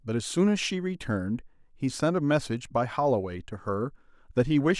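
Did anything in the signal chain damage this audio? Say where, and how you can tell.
No, nothing in this speech recording stood out on listening as damage from any stage of the signal chain.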